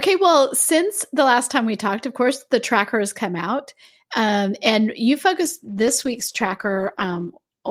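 At 5.46 s a call bitrate drop sets in and lasts to the end at 7.70 s. The sound turns coarse and muffled, with the top end cut away. This fits an encoder forced from about 48 kbps down to about 15 kbps.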